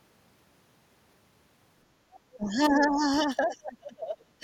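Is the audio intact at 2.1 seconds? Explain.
No. From 2.11 to 2.20 s a faint second voice, roughly 30 dB below the main speech, comes through: the other side's voice leaking through. It is likely that the far end played on the talker's loudspeaker and the echo canceller left some in the microphone signal.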